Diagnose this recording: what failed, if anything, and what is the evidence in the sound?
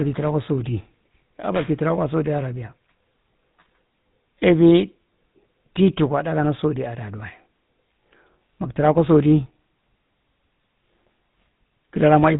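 The speech passed through the GSM full-rate codec, whose pulse-driven vocal-tract model leaves a buzzy, gravelly roughness and nothing above 4 kHz throughout, consistent with a 13 kbps rate.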